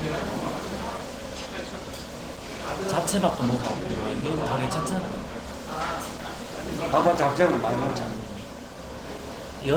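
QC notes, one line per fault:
Throughout, Opus compression: the sound is muffled and hoarse, with plainly audible grainy roughness where detail should be, though content still reaches about 20.1 kHz. Likely Opus running in its hybrid speech-oriented mode, which fits a starved bitrate near 16 kbps.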